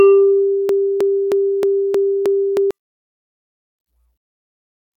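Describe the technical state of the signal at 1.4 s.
At 1.4 s the music is stuck in a broken-record loop running from 0.69 to 2.71 s. A fragment of about 313 ms plays back to back six times, likely because the player or stream stalled and kept resending its last buffer, so the music meant for that stretch is simply gone.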